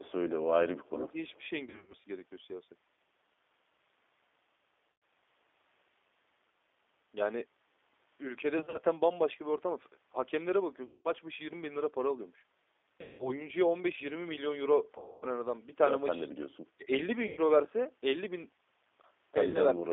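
G.729 coding runs throughout: the speech is rebuilt from a vocal tract model and sparse pulses, band-limited to roughly 300 Hz to 3.6 kHz, sounding plainly rough and synthetic, which fits an 8 kbit/s codec.

An echo leak at 0.81 to 0.89 s and again at 1.28 to 1.5 s brings back a faint copy of the voice, 356 ms late and about 35 dB down, likely from a far-end loudspeaker the echo canceller did not fully cancel.

Speech suppressed in double talk at 0.9 to 1.17 s and 16.77 to 16.91 s makes the voice dip by up to about 15 dB, likely because the echo canceller turned everything down while both sides spoke.

VoIP packet loss concealed by the speech codec hits at 1.66, 4.92, 8.58, 10.85, 13.01, 14.98, 17.27 and 19.48 s. Each gap lasts 60 to 240 ms. At 1.66 s, 180 ms is lost, scattered over 280 ms. The decoder stretches the last sound into a fading buzzy tone or coloured noise, and the voice stays weak briefly afterwards.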